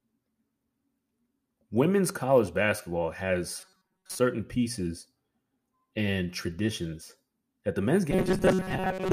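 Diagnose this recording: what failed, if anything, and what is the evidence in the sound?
Robotic sound from repeated short buffers after "college basketball" (3.61–4.19 s) and "traditions that the men's" (8.11 s onward): a stiff 188 Hz buzz, likely an underrun buffer looping 5 ms chunks.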